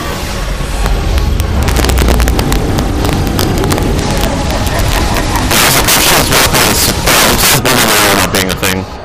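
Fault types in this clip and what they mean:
integer overflow: loud peaks driven about 14 dB too hot wrap to the opposite sign, cracking violently on roughly one sample in twenty; the waveform shows full-range flips, the spectrogram broadband vertical streaks.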